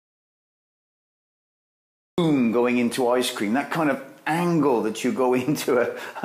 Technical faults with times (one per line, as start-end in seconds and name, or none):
0.00-2.18 audio dropout to silence